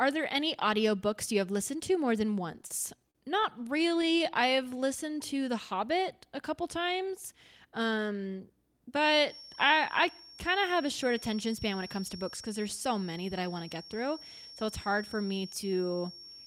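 A speech recording with three technical faults. Right after "listened to more than", from 2.52 to 4.34 s, the audio has repeated stalls (stutter). The delivery drags and catches in a rapid run of short hitches, the longest about 40 ms. Packets were arriving late or too slowly, so the jitter buffer kept running empty. Each time, the receiver stretched the last bit of sound until fresh data came. About 236 ms was filled this way, around 13% of that stretch. Nothing is actually lost. From 4.56 to 5.03 s a jitter buffer slow-down follows. The speech runs at about 93% speed, so that short span lasts 38 ms longer than it should. The pitch holds steady, but sounds are drawn out. With its reserve running low or its target delay just raised, the receiver repeated single pitch periods or slivers of pause to build it up. From 9.21 s to the end at 16.5 s, a thin whistle at 5.5 kHz sits well below the speech and slowly swells and fades in level. 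This is a feedback whistle. It is likely caused by the loudspeaker-to-microphone loop sitting right at the edge of feedback. One high frequency keeps ringing without ever running away into a full howl.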